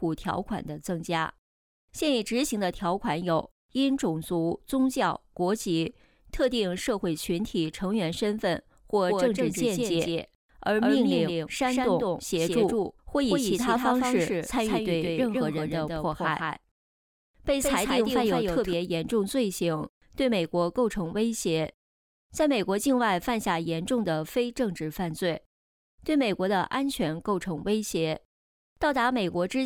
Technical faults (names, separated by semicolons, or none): doubled audio track